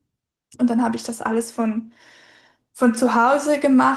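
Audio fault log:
No faults heard in this clip.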